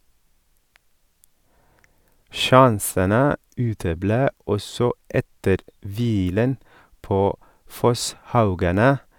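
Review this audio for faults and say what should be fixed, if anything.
Nothing here needs fixing, since the speech signal comes through intact with no technical faults to address.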